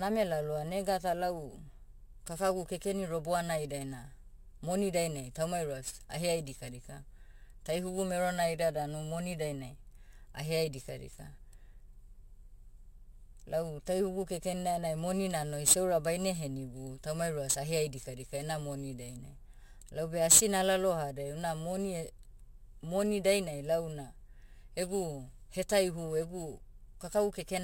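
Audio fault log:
Throughout, crude rate conversion: the speech was resampled with no filter, by repeating samples, which fits a jump from 32 kHz to 44.1 kHz. The repeating timing error creates inharmonic tones only roughly 15 dB below the speech, heard as a gritty fizz on louder and brighter sounds.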